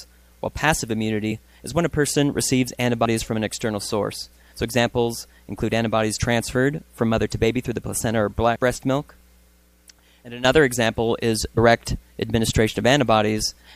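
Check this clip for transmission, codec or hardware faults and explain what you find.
Compressed frames are skipped three times, at 3.04 s, 8.55 s and 11.57 s. Each time, whole frames that were missing or rejected by the decoder, which fits a 23.2 ms frame length, are lost, and about 70 ms, then roughly 100 ms twice, of sound is gone. Unlike a dropout, there is no silent gap, as the audio jumps forward.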